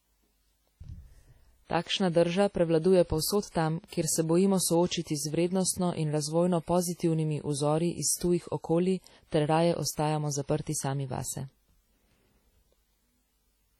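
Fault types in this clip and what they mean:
Low-bitrate audio saved at a high bitrate: the speech, likely first squeezed to around 32 kbit/s and then re-encoded as high-bitrate MP3, keeps the first codec's losses throughout. A spectrogram shows thin, patchy upper bands and nothing above 19.6 kHz.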